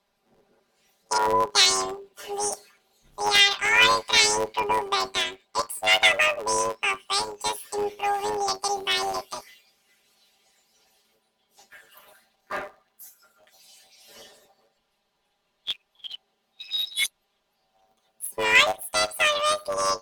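A robotic buzz at 100 Hz runs through the whole speech clip, from planar audio read as interleaved: each 10 ms block plays left then right at double speed.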